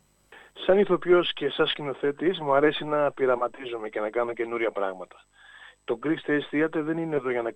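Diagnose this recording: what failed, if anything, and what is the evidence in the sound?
Nothing failed; no faults found.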